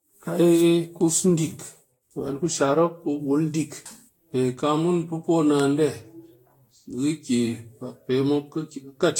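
Speech throughout the whole clip with a swirly, hollow, smeared quality and blurred consonant attacks, plus nothing above 19 kHz. That's likely generation loss: repeated lossy re-encoding, roughly seven passes, consistent with Vorbis at around 68 kbit/s, stacking up quantisation noise.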